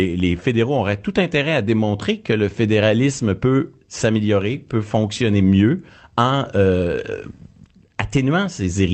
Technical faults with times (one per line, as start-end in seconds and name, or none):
none